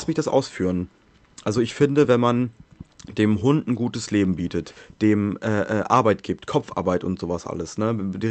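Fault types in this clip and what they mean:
Nothing stood out on listening to this speech as it came through the call path.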